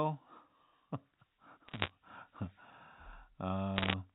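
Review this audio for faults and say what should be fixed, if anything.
Bit errors on the digital phone line flipped individual bits in the G.711 A-law stream from 1.68 to 1.90 s, at roughly one percent, and from 3.76 to 3.94 s, somewhat denser. Each corrupted sample that takes a hit on a high bit or on the sign of a loud sample becomes a sharp tick, so both stretches crackle over otherwise intact speech. Adding error detection or forward error correction on the link, or fixing the noisy line or interface, would prevent these hits.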